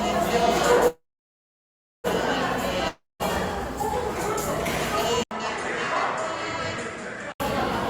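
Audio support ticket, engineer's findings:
Call audio freeze, 0.88–2.07 s: likely jitter buffer underrun from delayed packets. Last sound fades to about 1.04 s of silence, then resumes intact, about 1.16 s late.

Long network dropout, 2.88–3.23 s: likely packet loss. Fading fill, then about 0.19 s of silence; roughly 0.32 s of sound never returns.

Input switched to a poorer device, 5.23–7.40 s: likely mid-recording input change. An 80 ms gap, then nothing above 9.9 kHz, level about 5 dB lower, and new noise about 45 dB down.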